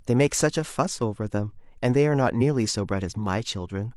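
A short speech recording carries one brief burst of corruption: from 2.37 to 2.42 s the sound breaks up for around 40 ms. This is damaged data in the compressed stream. A stretch of the encoded bytes there was lost or overwritten, so the decoder could not read those frames properly, lost its place in the stream, and produced garbage until it locked back onto the next valid frame header.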